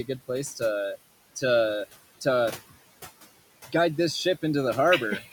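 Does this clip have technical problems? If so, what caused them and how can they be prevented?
Yes. Throughout, a noise suppressor cuts the steady room noise by about 16 dB frame by frame, so it sinks between phrases and swells under speech. Preventing this means using gentler suppression, or none, since the room noise already sits about 19 dB below the speech.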